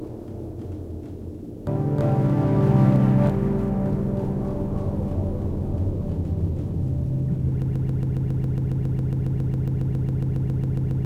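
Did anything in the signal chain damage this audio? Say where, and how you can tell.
Yes. A broken-record loop starts at 7.62 s and runs to the end of the clip. From that point a fragment about 137 ms long repeats exactly, back to back, about 25 times. The cut points fall at the same place each cycle, so the rhythm is mechanical. The cause is likely a stall at the buffer or playback stage. The player kept resending its last block. Whatever sound belonged in those final seconds is gone.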